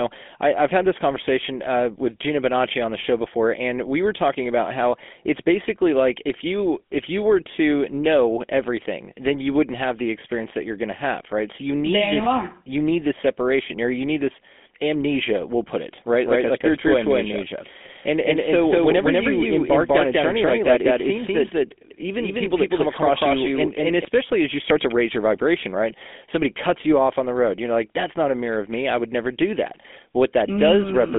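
From start to finish the speech passes through the GSM full-rate codec, with its pulse-driven vocal-tract model at a rate that fits 13 kbps. The sound is narrowed to about 200 Hz to 3.5 kHz, nothing above 3.7 kHz, and carries a plainly audible buzzy, gravelly roughness.

From 16.25 s to 24.05 s a doubled audio track appears, likely a second, slower capture path mixed back in. A second copy, about as loud as the original, trails by roughly a fifth of a second, then cuts in and out abruptly.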